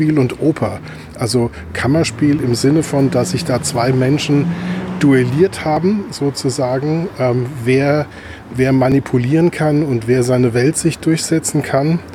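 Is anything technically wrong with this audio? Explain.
Yes. Small forward jumps at 2.39, 5.77 and 8.92 s, roughly 5, 15 and 10 ms lost, point to a likely dropped buffer (overrun). The sides join with no silent gap, unlike a dropout.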